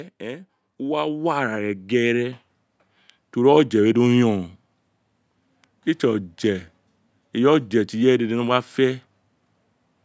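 Automatic gain rising from 0.18 to 2.43 s: the gain control judged the speech input too quiet and lifted its level gradually, by about 9 dB, so the voice and the background noise swell together over those two seconds, heard through the call's band-limited microphone path.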